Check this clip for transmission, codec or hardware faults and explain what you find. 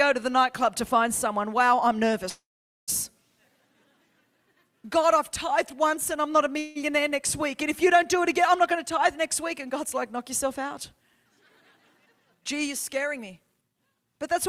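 Two kinds of fault are present: two call audio freezes and two stretches of jitter buffer speed-up.

The call audio freezes fall at 2.29 to 2.90 s and 6.59 to 6.77 s. At each one the last sound carries on as a buzz or hiss that fades. The first fills about 0.58 s and ends in about 0.47 s of silence. The second fills about 0.17 s and never goes silent. The audio then resumes where it stopped, with nothing missing. The likely cause is late packets emptying the jitter buffer.

Jitter buffer speed-up follows, from 11.97 to 12.53 s and from 12.96 to 13.69 s. The buffer held more audio than its target. The receiver cut short pitch-period pieces, many in a row, to reduce the delay. Roughly 70 ms goes each time. Playback runs at 111% and then 108% speed, with the pitch unchanged. Both stretches sound hurried.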